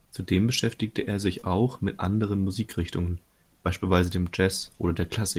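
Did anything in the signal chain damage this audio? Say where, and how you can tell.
Yes. The damage happened on the network leg of this speech call, at 1.39 to 1.49 s. It is a short concealed packet loss. About 20 ms of audio arrived too late or not at all. The receiver covered the gap with 23 ms of synthesized sound, extending the last stretch, then crossfaded back into real speech. That adds about 10 ms. You hear a brief smear or wobble there, not a clean dropout to silence.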